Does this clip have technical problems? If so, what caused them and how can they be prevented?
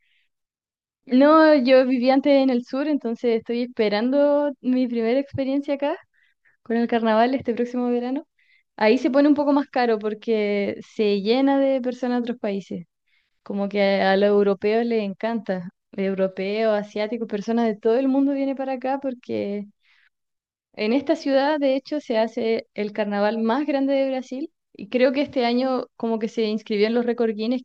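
No, nothing in this speech clip comes across as a technical problem, so there's no cause to track down and nothing that needs preventing.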